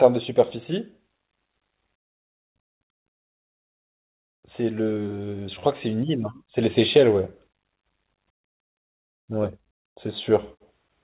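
From 4.58 s to 7.34 s you get automatic gain rising: the gain control decided the speech was too quiet and eased its gain up by about 6 dB, so voice and background swell together. The band stays capped at 4 kHz throughout, which fits a narrowband G.711-style call codec.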